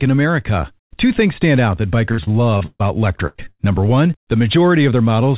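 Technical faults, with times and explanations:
2.12–2.82 s: repeated packet loss (robotic sound). Four gaps, the longest 132 ms, each patched by stretching the last sound, so about a third turns choppy.
3.27–3.61 s: repeated packet loss (robotic sound) again. Four more gaps, longest 84 ms, and concealment covers over half this stretch, making it choppy.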